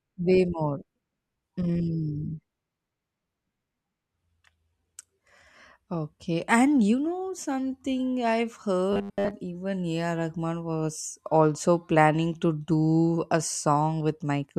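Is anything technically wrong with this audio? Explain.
Yes, from 8.93 to 9.31 s, just after "you know something I've", there's robotic sound from repeated short buffers: a rigid 100 Hz metallic buzz, likely from a 10 ms chunk looping over most of the stretch while fresh audio gets skipped.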